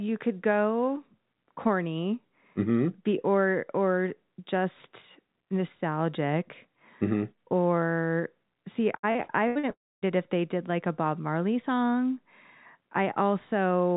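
From 8.96 to 9.66 s, just after "or see", the sound turns choppy, with small pieces missing. This is repeated packet loss (robotic sound): five separate gaps, the longest 78 ms, were each patched by stretching the previous audio, so concealment fills about 39% of that span.

From 9.71 to 10.05 s, a short buzzy smear fades into roughly a quarter second of silence, and the audio resumes on "it if they did" with a piece skipped. The likely cause is a long network dropout, in which about 320 ms of audio never arrived. All of this sits in a band with nothing above 4 kHz, consistent with a G.711 call path at 64 kbps.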